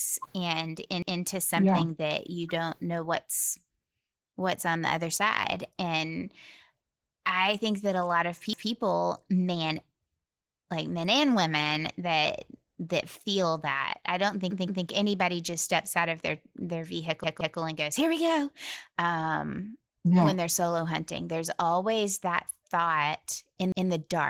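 Throughout, Opus voice compression at 16 kbps in hybrid mode codes the speech coarsely, leaving it audibly hoarse and slightly robotic across the full band. Repeated buffers stutter the speech at 1.02, 7.00, 8.53, 10.41 and 23.72 s, and twice over at 14.51 and 17.24 s. Each replays a 171 ms piece with hard joins, which fits an 8192-sample buffer.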